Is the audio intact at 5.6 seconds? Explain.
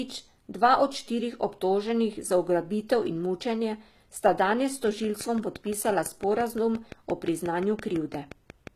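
No. At 5.6 seconds a train of clicks is running. It starts at 4.87 s, just after "mučenje sta danes s", and continues to 8.68 s. Regular pulses arrive about 5.8 times a second, around twenty in all, each peaking about 5 dB above the speech. They are heard as steady ticking over the voice and through the pauses. A waveform shows evenly spaced spikes, and a spectrogram shows thin vertical lines. The likely cause is interference or a faulty connection or supply.

The whole clip, this moment included, also carries HE-AAC compression damage, which is plainly audible and likely comes from a low bitrate around 20 kbps. Only the lower spectrum is coded. The treble is rebuilt by copying lower bands upward under a coarse envelope, so harmonics do not line up across the crossover and sibilants sound gritty or metallic. On a spectrogram the upper band looks blocky and repeated, with nothing above 14.9 kHz.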